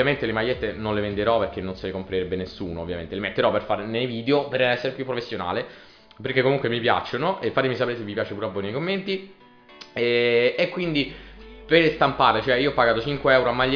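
Nothing in the audio stood out as a technical problem on listening.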